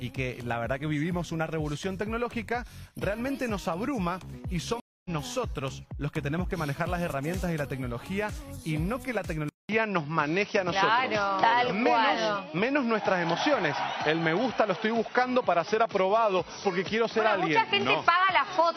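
At 4.8 s the audio drops out for 250 ms and picks up again at 5.10 s, skipping ahead by roughly a fifth of a second. This is a stream reconnect: the connection broke, the player went silent, then rejoined the live stream later with a fresh decoder.

From 9.49 s to the end, after a 200 ms gap, the sound turns dull, with nothing above 5.9 kHz, a level shift of around 5 dB, and new background noise roughly 50 dB down. The likely cause is the input switched to a poorer device mid-recording.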